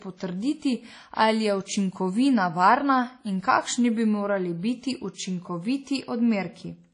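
Speech, likely put through WMA compression at a low bitrate, consistent with about 32 kbps. Throughout, nothing remains above 10.1 kHz, and plainly audible ringing, washy smearing and hiss that breathes with the signal result.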